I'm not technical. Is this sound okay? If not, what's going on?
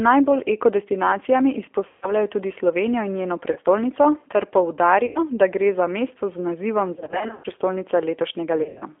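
No. The call went through a G.729 codec, a low-data telephone method that rebuilds the voice from a simplified model instead of sending the actual sound. Throughout the clip this makes the speech narrow and telephone-like, with nothing above about 3.4 kHz and no deep bass. The codec damage is plainly audible: the voice sounds slightly rough and artificial, though it stays understandable.

There is also VoIP packet loss concealed by the speech codec. Pieces of the call went missing in transit, and the receiving end filled each gap by guessing, repeating the last bit of voice and fading it out. These gaps sound like a short buzzy smear, or a brief muffled fade, where the speech should be, followed by a moment of weak or distorted voice. This happens at 1.87–2.11 s, just after "najbolj eko destinacijami"; at 3.52–3.58 s; and at 5.06–5.20 s, just before "da gre za". It also happens at 6.94–7.46 s, where repeated dropouts break up half a second, and at 8.61–8.84 s.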